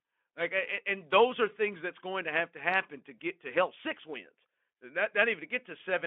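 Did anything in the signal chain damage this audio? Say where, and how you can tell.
Yes. The damage happened at the network stage, as VoIP packet loss concealed by the speech codec. At 3.18 s, right after "have to happen to" and before "to help six wins", there is a brief smeared patch. It sounds like a single lost frame of about 20 ms. The Speex decoder filled the gap by stretching its last pitch and filter at reduced gain, and because each frame builds on the last, the voice stayed weak or distorted for tens of milliseconds after packets returned.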